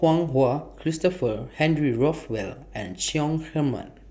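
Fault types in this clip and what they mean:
No technical faults can be heard anywhere in the recording; the signal carries through steadily without any disruption or damage to the audio path.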